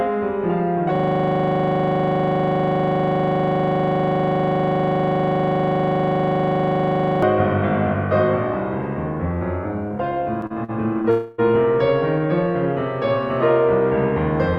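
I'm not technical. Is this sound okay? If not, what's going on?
No, there are three separate problems in this music clip.

From 0.95 to 7.23 s there's a system hang loop. The computer or its audio driver froze, but the sound hardware kept replaying the last 40 ms slice it had been given, over and over, about 25 times a second. So for roughly six seconds the music doesn't move forward at all. You just hear a rapid, buzzy rattle of that one tiny fragment until things unfreeze.

Between 10.41 and 11.06 s you get repeated stalls (stutter). The audio was arriving over a call connection, and it came in a bit too slowly four times in a row. Each time, the receiving end briefly stretched the last bit of sound to cover the wait, the longest being about 44 ms. Nothing is actually lost, but the music drags and hiccups through that stretch.

Right after that, from 11.10 to 11.40 s, there's a call audio freeze. 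The likely cause is data being held up on its way across the network. For about 0.28 s the receiver kept extending the last sound rather than going quiet, and then the music picked up exactly where it left off. The tune isn't missing anything, but a short pause-like smear has been inserted into it.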